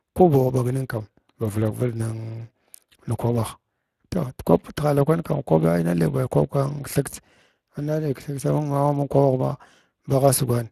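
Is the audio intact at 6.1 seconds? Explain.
No. At 6.1 seconds the speech sounds noisy and hoarse, with plainly audible Speex codec damage, and there is nothing above 15.4 kHz. This runs through the whole clip. The CELP coder has too few bits for the excitation, so the voice's fine detail is only roughly rebuilt, which fits a rate of about 22 kbps.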